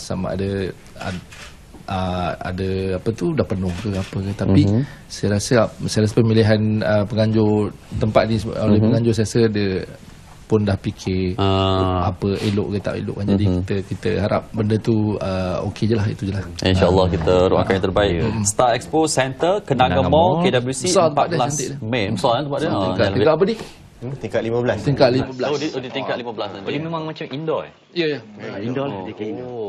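At 25.24 s the input has likely switched to a poorer device, and it stays on it to the end. From there nothing is passed above 7.3 kHz, so the sound turns duller and boxier, drops a few decibels with no gap at the switch, and carries a faint new noise floor.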